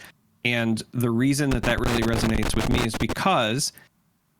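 Speech with a burst of loose connector crackle from about 1.51 s to 3.17 s, right after "the reason". A worn or dirty contact is making and breaking as it shifts, chopping the signal into irregular scratching.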